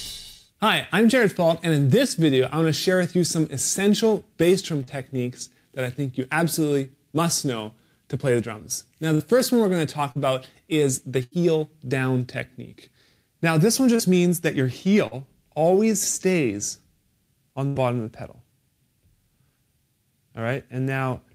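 Short concealed packet loss occurs at 4.83, 9.15, 10.12, 13.96 and 15.07 s. Each time, about 40 ms of audio failed to reach the decoder in time, and the receiver covered the hole with roughly 35 to 44 ms of synthesized continuation. It extended the preceding sound, as pitched material if voiced and as shaped noise if not, then crossfaded back into the real signal, leaving a brief smear or wobble. A burst of packet loss appears at 11.23 and 17.67 s, where about 80 ms went missing in one run. The receiver held the last sound for around 80 ms while fading it down, producing a sustained buzz or a decaying hiss. The audio then picks up later in time with that stretch gone.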